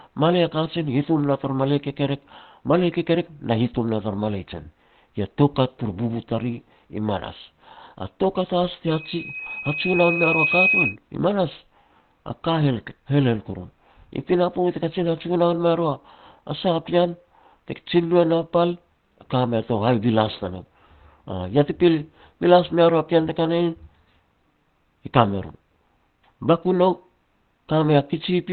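From the start, the whole clip has that muffled, hoarse quality, and nothing comes through above about 4.3 kHz. That's likely Opus compression, which here would have dropped into its speech mode with a narrowband output. The damage is plainly audible: the top of the spectrum is gone and the voice sounds rough and boxy. This fits a low rate of around 16 kbps, where the encoder gives up bandwidth to keep going.

At 8.87 s a loudspeaker feedback squeal starts. The microphone is picking up its own speaker, and at about 2.5 kHz the loop gain climbs past one, so that single tone feeds itself. You hear it swell over roughly a second and a half until it sits about 5 dB louder than the speech. It stops at 10.96 s, just before "i manas a".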